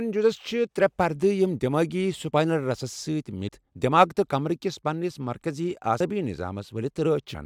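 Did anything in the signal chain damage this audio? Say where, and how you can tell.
Yes, at the codec stage: compressed frames skipped. The speech jumps forward at 3.48 s, just before "دماغ تہٕ کمبرٕکِس پنس", at 5.99 s, right after "تہٕ کمبرٕکِس پنس مرکٔزی", and at 7.34 s. Roughly 150 ms, 70 ms and 200 ms go missing. Each join is a short smeared blip, not a click. That fits whole overlapping frames of about 21.3 ms being lost or rejected by the decoder.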